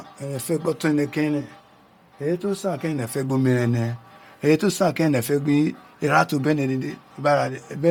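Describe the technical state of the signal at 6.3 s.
At 6.3 s, as throughout, the speech carries a grainy, breathy edge, likely Bluetooth LC3 compression at roughly 32 kbps, with its upper spectrum thinned and noise-filled.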